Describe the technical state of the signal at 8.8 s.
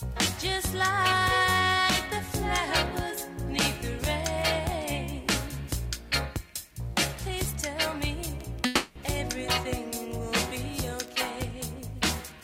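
At 8.8 s the signal sits inside what is likely a long network dropout, running from 8.65 to 8.98 s. For about a third of a second no fresh audio reaches the player, so the receiver keeps extending the last sound it had as a buzzy, hiss-like continuation for roughly 300 ms, and that much of the original is simply gone. Unlike a brief packet-loss glitch of a few tens of milliseconds, this fill lasts long enough to be heard as a smeared, fading drone rather than a tiny click or stutter. It never fades to silence before the real audio resumes, with the lost stretch skipped rather than delayed.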